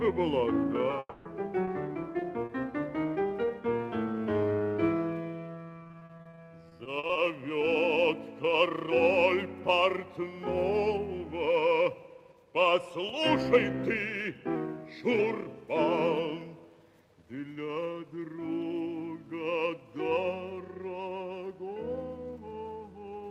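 A long network dropout starts at 0.99 s and runs to 1.27 s. The sound stops short, and the last moment is stretched into a buzzy tail that fades over roughly a quarter of a second, with a brief silence at the end before the audio resumes. The material from that gap never returns. This most likely comes from a run of data that never reached the receiver, which filled the hole by extending what it last had.

Repeated packet loss (robotic sound) follows from 1.65 s to 2.51 s. A handful of short holes, none longer than 40 ms, are each patched by repeating the preceding sound, so about 12% of the span is filler. A second, heavier stretch runs from 5.83 s to 7.17 s, with many more holes of up to 40 ms covering about 27% of the span. There the sound turns choppy, with pieces missing, because the holes arrive close together.

A drift correction step runs from 14.56 s to 15.19 s. Playback slows by 5.5% and the pitch drops by about 98 cents, almost exactly a semitone. 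This makes the passage sound briefly detuned and sluggish. The likely cause is clock-matching software that suddenly altered the playback rate to rebalance its buffer.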